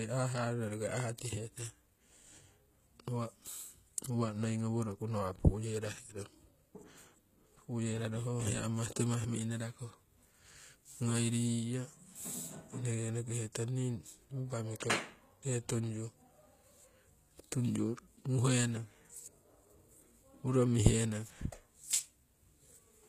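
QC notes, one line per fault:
Throughout, HE-AAC compression: the treble is likely rebuilt from copied lower bands, so s sounds turn gritty and lispy, and nothing is left above 14.9 kHz.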